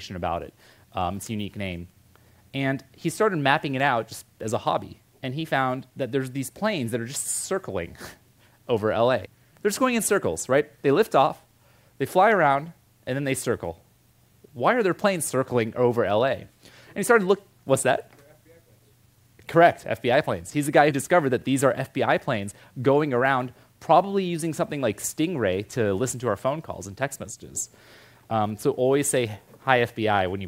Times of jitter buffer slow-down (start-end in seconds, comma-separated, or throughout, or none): none